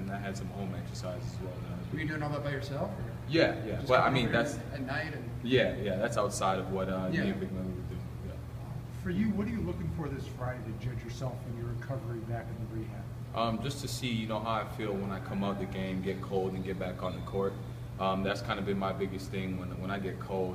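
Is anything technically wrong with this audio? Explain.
No, nothing technically wrong turns up anywhere in this audio.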